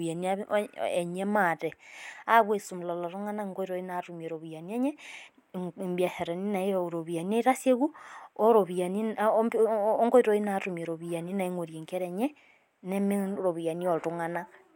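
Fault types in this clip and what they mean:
No technical faults can be heard in this recording.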